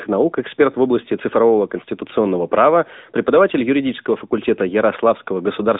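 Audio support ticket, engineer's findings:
AMR narrowband mobile codec, throughout. Nothing above 3.8 kHz; band roughly 200 Hz to 3.7 kHz, 8 kHz sampled telephone path. Plainly audible codec damage: buzzy, synthetic speech from pulse-driven vocal-tract model, consistent with a mid-rate mode near 10.2 kbps.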